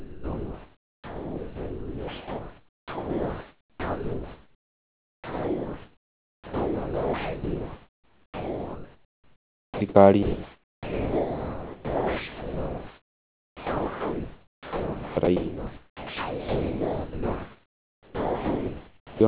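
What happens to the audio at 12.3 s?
The sender's voice detector likely mistook the speech for background and stopped transmitting from 10.23 to 15.17 s, so the receiver filled those 4.94 s with comfort noise. About 3.31 s of speech disappears under a steady, featureless hiss until transmission resumes.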